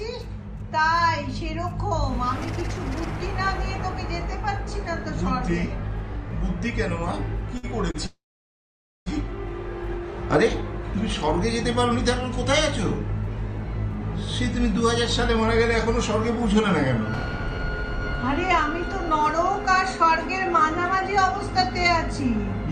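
Two short stalls from late packets occur at 7.57 to 7.65 s and 7.91 to 7.96 s. In each, the jitter buffer ran dry and the receiver held the last sound for 56 ms and then 32 ms, giving a brief drawn-out moment with a slight buzz or dip before resuming with nothing lost. From 8.06 to 9.08 s comes a call audio freeze: the sound is extended for about a second, fading to near-silence for roughly 870 ms, then picks up where it stopped. This is likely due to packets held up in the network, so the buffer emptied and a gap was inserted rather than any audio dropped. Between 17.24 and 22.37 s a jitter buffer speed-up plays the audio at 101% of normal rate. Pitch is unchanged, but roughly 70 ms of short pitch-period slices are trimmed out to pull the accumulated delay back toward target.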